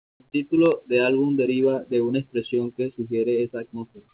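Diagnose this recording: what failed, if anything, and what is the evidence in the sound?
Comfort noise in place of the background, from 0.0 to 0.2 s: a steady, featureless hiss about 26 dB quieter, likely discontinuous transmission in call processing substituting synthetic noise.

Onset clipped by the voice detector at 0.18 s: the sound begins abruptly, missing about 20 ms of its start, likely because the detector reacted late.

Loud pop, two in quick succession between 0.66 and 0.74 s, well above the signal: likely a voltage step in analogue wiring or a driver glitch.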